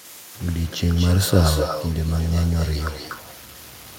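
From the first moment to the end, the speech has a grainy, rough edge that tracks the voice. It thickens on quieter syllables. That's low bit depth without dither. The likely cause is samples truncated to something like 7 bits with no dither added, so the rounding error moves with the signal and sits only about 25 dB under the speech.

Running alongside that for the whole clip is echo with no canceller. Every phrase is trailed by a fainter, thinner copy arriving roughly a fifth of a second later, about 12 dB down. It's the classic loop where the far end's loudspeaker feeds back into its microphone and nothing on the line strips that return out. The result is a constant shadow behind the voice.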